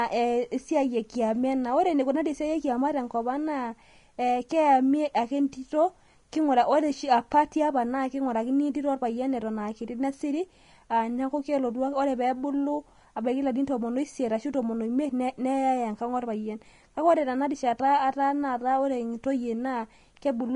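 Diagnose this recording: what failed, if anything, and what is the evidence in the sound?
Codec stage: throughout, the speech stops dead at 10.6 kHz and the treble is grainy and hissy. That's likely Vorbis compression at around 33 kbps, turning fine detail into noise.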